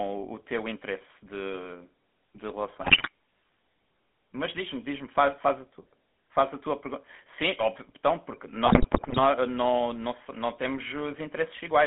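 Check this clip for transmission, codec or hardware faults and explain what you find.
Two faults stand out: GSM-style coding throughout the speech and two bursts of corrupted decoding.

GSM full-rate codec, throughout: the voice is rebuilt from a vocal-tract filter and a thinned, regularly pulsed excitation, which fits a 13 kbps full-rate stream. The band runs from 200 Hz to 3.5 kHz, and the speech has a plainly audible buzzy, gravelly roughness.

GSM bit errors, 2.82 to 3.09 s and 8.65 to 9.19 s: corrupted filter, pitch and gain values reached the decoder, bending the spectrum and spiking the level frame by frame. The speech breaks into squawks, pops and gargling.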